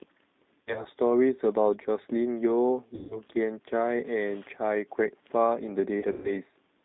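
G.729 codec damage runs through the whole speech clip. The band is held to roughly 200 Hz to 3.7 kHz, and the pulse-coded excitation gives a plainly rough, synthetic edge. That points to G.729A at 8 kbit/s.

VoIP packet loss concealed by the speech codec appears at 0.61 to 0.87 s, 2.95 to 3.20 s and 6.00 to 6.31 s. The decoder stretches its last pitch and filter into a fading buzzy tone or coloured noise while audio is missing. About 120 ms is lost in runs scattered over 240 ms in the first event, 150 ms in the second, and 150 ms scattered over 240 ms in the last, with a longest gap of 120 ms. The speech stays weak briefly after each.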